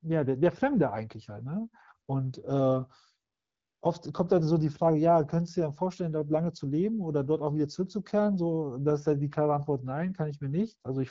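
From 3.33 to 3.81 s, AMR comfort noise fills a 480 ms gap. The phone treated the talker as silent and sent no speech frames, so the receiver substituted smooth synthetic noise for the real background. Underneath, the AMR wideband codec adds only light coding damage, consistent with its 12.65 kbit/s mode.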